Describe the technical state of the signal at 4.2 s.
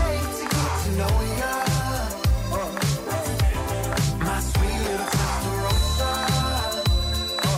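At 4.2 s the signal is intact, with no dropout, distortion, noise burst or other technical fault to be heard at that point.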